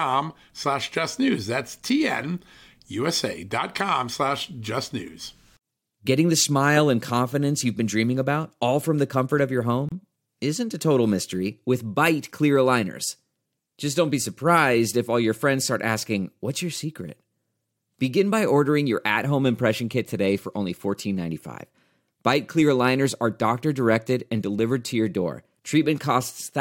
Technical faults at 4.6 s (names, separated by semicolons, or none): none